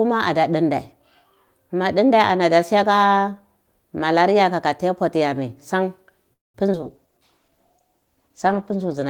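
At 6.33 s the speech stops abruptly, and a trace of the last sound fades to near silence before the audio resumes at 6.56 s. This call audio freeze adds roughly 0.21 s of delay and loses nothing. The likely cause is packets stalling in transit until the jitter buffer ran dry.

At 6.72 s and again at 6.81 s there is a brief smear or wobble. Each is a short concealed packet loss: about 20 ms of audio never arrived, and the receiver patched the gap by extending the preceding sound before blending back in.

From 6.82 s to the end, the speech turns rougher and duller. This is a call bitrate drop from 32 to 13 kbps, as the encoder, working from a lower bandwidth estimate, codes more coarsely and trims the upper frequencies.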